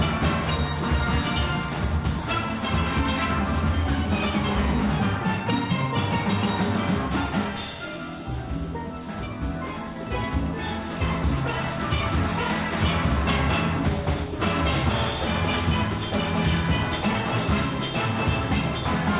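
Nothing in this clip trips any alarms, with no dropouts, glitches or other technical trouble to point to anywhere along the way.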